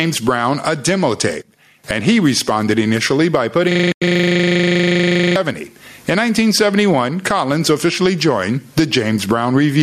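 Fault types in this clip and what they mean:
Gain pumping: The input gain appears set far too high, with a fast limiter or compressor likely clamping it on every loud sound. Loud and quiet parts end up closer in level, with a gain swing of around 20 dB, leaving the speech squashed and flat in dynamics.
System hang loop: Processing froze while the audio hardware kept replaying one section of its buffer. From 3.71 to 5.36 s a 40 ms slice repeats exactly, cycling at 25 Hz, which comes across as a rapid mechanical stutter with a buzzy edge in place of continuing speech.
AAC frame loss with muting: Compressed frames went missing, and the decoder zeroed their content instead of concealing it. Inside the looping section, from 3.92 to 4.02 s, there is a 100 ms hole where the sound fades down and back up through the overlapping windows rather than cutting off sharply.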